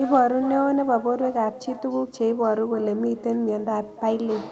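Throughout the speech, echo with no canceller is audible. The far end's loudspeaker feeds its microphone, so each phrase returns about a third of a second later, roughly 15 dB quieter and thin. The call path's Opus coding limits the sound to about 8 kHz.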